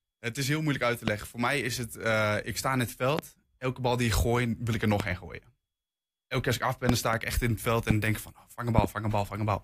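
A sudden voltage step or pulse, likely from a plug, a switch, static or a driver glitch, enters the signal path six times. The circuitry after it shapes each one into a loud pop about 20 dB above the speech, which carries on underneath. Single pops fall at 1.08–1.10 s, 3.19–3.21 s, 5.00–5.02 s and 7.91–7.93 s. Two pops in quick succession come at 6.89–7.16 s and 8.78–8.86 s.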